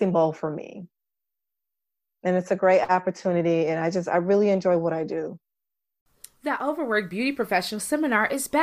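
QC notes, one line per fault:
No faults found in the speech clip. Nothing here calls for a QC entry.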